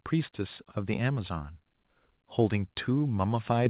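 At 3.66 s the call software judged the microphone too quiet and raised the device's input volume in a single step, the microphone volume stepped up by about 6 dB. The speech and the background noise jump louder together, right at the clip's end, over audio already band-limited to 4 kHz, which fits a G.711 call path.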